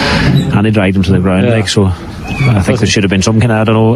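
Gain pumping runs through the whole clip, with the level swinging by around 20 dB. The likely cause is input gain set far too high, with a fast limiter or compressor clamping down on each peak. Unlike a noise gate, which cuts the gaps to silence, this leaves the loud and soft parts squashed close together.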